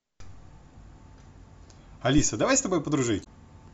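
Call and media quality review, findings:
Phantom power thump, 2.18–2.35 s: deep low-frequency thump on the speech input, decaying in about 38 ms. Supply switched on a live input; the voltage step passes through the coupling capacitors. Waveform shows a large one-sided swing; spectrogram shows a dark band below a few hundred Hz.

Damaged data in the compressed stream, 3.20–3.27 s: short glitch in the speech. Corrupted frames are misread by the decoder, which loses sync and hunts for the next header. Waveform shows a discontinuity at both edges.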